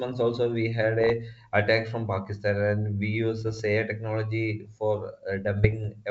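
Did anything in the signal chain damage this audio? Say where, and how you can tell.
Yes, there are bit errors on an ADPCM link, damage in the transmission stage where the coded bitstream got corrupted. Listen at 1.01–1.10 s, between "also we had" and "attack from", then at 3.41–3.62 s and 5.57–5.89 s: pops and rough, gritty bursts with brief level jumps. Each flipped bit throws off the decoder's step size and predictor, so the damage smears on for a few milliseconds. It points to an error rate of a few tenths of a percent, on what sounds like a clean wideband G.722 path.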